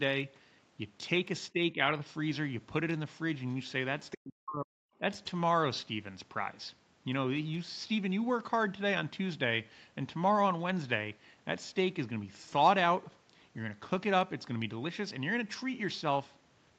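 It's a speech clip over a call line that tops out around 8 kHz, and the talker gets ducked twice, from 1.53 to 1.93 s by about 10 dB, then much harder from 4.16 to 5.02 s, nearly cutting out, likely speech suppressed in double talk by the echo canceller. Just before that, at 4.1 to 4.18 s, a faint scrap of the other side's voice leaking through sits about 15 dB under the talker, likely loudspeaker echo the canceller missed.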